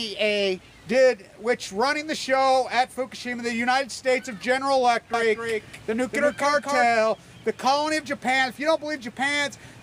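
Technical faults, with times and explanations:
5.14 to 6.86 s, doubled audio track: a second full-band copy of the sound runs about a third of a second behind the original, a few decibels quieter. It carries no decay or room colour. It simply repeats, so it reads as a hard slapback. It switches on and off abruptly at the range edges. This likely comes from the signal being captured twice, once through a slower path.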